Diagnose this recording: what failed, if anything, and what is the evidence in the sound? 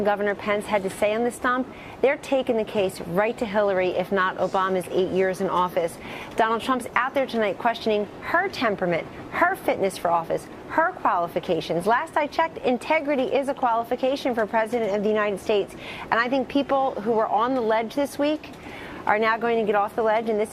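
Nothing in the signal chain shows a failure: the level, continuity and timing of the audio hold steady throughout, with no break, distortion or disturbance that would point to any stage of capture, conversion, transmission or playback.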